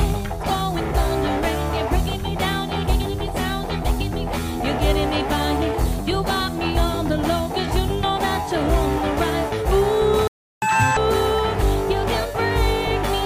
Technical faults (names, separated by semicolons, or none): playback stall; catch-up at higher speed